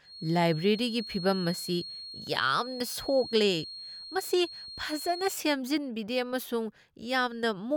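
A speech recording with a feedback whistle from the start to 5.41 s: a thin, steady tone at 4.3 kHz sitting roughly 15 dB below the speech, swelling and fading slowly in level. It is likely a loudspeaker-to-microphone loop held just short of runaway. A spectrogram would show one unbroken horizontal line at 4.3 kHz that stops at 5.41 s.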